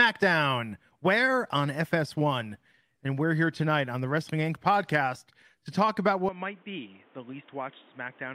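From 6.29 s to the end, the speech abruptly turns dull and boxy, with nothing above 3.8 kHz, about 5 dB quieter, and carrying faint new background noise, with no gap at the change. The likely cause is the input switched to a poorer device.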